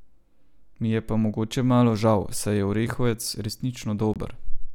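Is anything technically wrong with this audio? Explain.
Yes. At 4.14 s a hard-edged 22 ms silent hole interrupts the speech: a gap between stream segments, where timestamps leave space and silence fills it. Unlike a dropout, no audio is lost.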